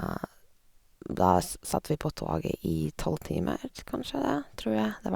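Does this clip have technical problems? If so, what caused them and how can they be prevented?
No, the speech signal shows no technical problems that a listener can detect, so there is nothing here that needs preventing.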